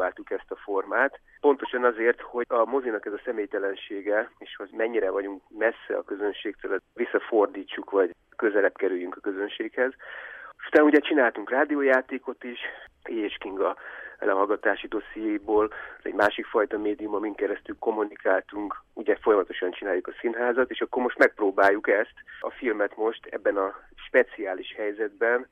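No technical faults detected anywhere in the recording.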